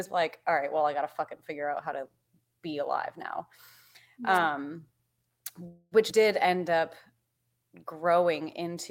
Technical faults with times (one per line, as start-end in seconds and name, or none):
4.34-4.39 wireless microphone noise hit
5.67-5.94 call audio freeze
6.10-6.12 skip ahead
6.46-7.33 jitter buffer slow-down